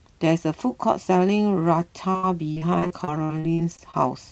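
From 2.11 to 3.94 s the speech breaks up with repeated packet loss: thirteen gaps, the longest 69 ms, each patched by extending the previous sound, covering about a quarter of the span. It sounds choppy and robotic, and a spectrogram shows smeared, repeated frames between dropouts.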